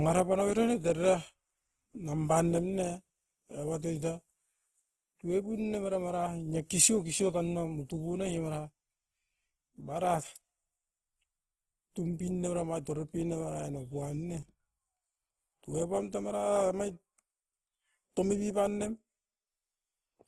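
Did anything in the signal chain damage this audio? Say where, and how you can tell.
Yes, at the codec stage, likely Opus compression in its CELT music mode, heard across the whole speech clip. Nothing sounds above about 12.2 kHz, and starved bands are filled in rather than left empty, so the speech turns grainy and rough, consistent with a rate around 16 kbps.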